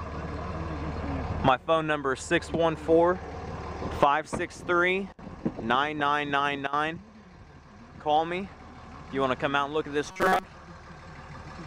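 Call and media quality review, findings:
Robotic sound from repeated short buffers, 10.08 to 10.44 s. Likely audio input underrun: fresh data stopped arriving in time, so playback looped the last short buffer, about 5 ms, over and over while most of the real audio went missing. Result: a rigid metallic buzz at 188 Hz laid over the sound, which only roughly keeps its original shape.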